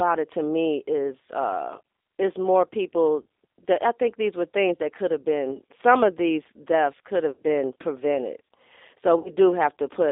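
A speech recording runs through the G.729 codec for its whole length. The audio is held to a line band of about 300 Hz to 3.7 kHz, and the voice has a plainly audible rough, slightly synthetic grain, which fits G.729A at 8 kbit/s. That grain separates it from a simple telephone-band filter, which would narrow the sound without adding roughness: here the speech is being rebuilt from a vocal tract model and a few pulses per frame rather than passed through. VoIP packet loss concealed by the speech codec occurs three times: at 3.22 to 3.25 s, at 7.32 to 7.40 s and at 9.19 to 9.31 s. The missing stretches sound like about 30 ms at the first point and about 60 ms at each of the later two, which points to one lost packet and then two. Unlike a plain dropout, these gaps are not silent. The decoder stretches the last pitch and filter into a buzzy tone or coloured noise that fades, and because each frame builds on the one before, the voice stays weak and smeared for a short while after each gap instead of snapping back cleanly.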